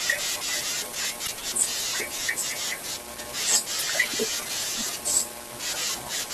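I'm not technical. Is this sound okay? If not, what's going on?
No. There are two short glitches, at about 1.24 to 1.29 s and 3.78 to 3.83 s. This is damaged data in a compressed stream: corrupted bits make the player stumble, causing brief blips.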